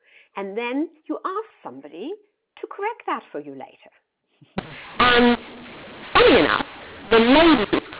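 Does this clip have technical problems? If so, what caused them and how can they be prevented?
Yes. From 4.58 s to the end, the speech turns harsh and gritty, and the pauses fill with a hiss that wasn't there before. That's a classic mu-law and A-law mix-up. The telephone audio was encoded with A-law G.711 but decoded as mu-law, so every 8-bit code maps to the wrong level. Some samples come out too loud, others too quiet, and the near-silent ones get pushed well above silence. To prevent it, make sure both ends of the link agree on the companding law, ideally by signalling the codec explicitly rather than assuming a regional default.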